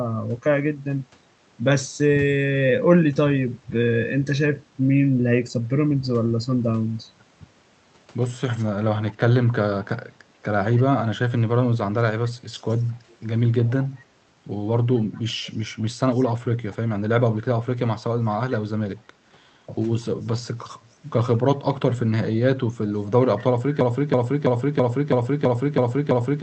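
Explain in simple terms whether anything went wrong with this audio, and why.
Two things went wrong in this speech. An echo leak lets a faint copy of the voice return about 0.22 s late at 8.53, 10.75, 15.13, 16.13, 20.23 and 23.06 s, likely from a loudspeaker echo the far end didn't cancel. From 23.81 s to the end, a broken-record loop repeats the same 0.33 s scrap over and over, likely a stalled stream, and the speech after that point is lost.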